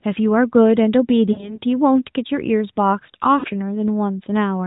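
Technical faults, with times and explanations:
1.32–1.61 s and 3.40–3.47 s, lost AMR speech frames: runs of three and two 20 ms frames went missing, so the decoder reused the last good pitch and vocal-tract settings at falling gain. Unlike a hard dropout, the sound smears and fades instead of cutting off, then returns briefly rough.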